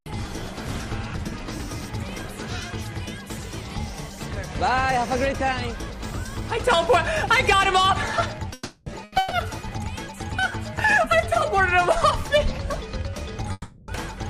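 From 8.53 to 8.89 s a call audio freeze holds the last sound as a fading buzz or hiss for about 330 ms, likely because packets were held up in transit and the jitter buffer ran dry. On a spectrogram this shows as flat, smeared horizontal bands, and on the waveform as a decaying, repetitive envelope.

At 9.04 to 9.15 s a short stall from a late packet stretches one sound by 80 ms, heard as a held moment with a slight buzz or dip. It appears as a brief frozen patch in the spectrogram.

Two more freezes follow. The one at 9.18 to 9.34 s lasts 130 ms. The one at 13.52 to 13.91 s runs 360 ms and ends in about 20 ms of near-silence, a thin flat stretch on the waveform. In each case the audio resumes where it stopped, so nothing is lost but everything after arrives later.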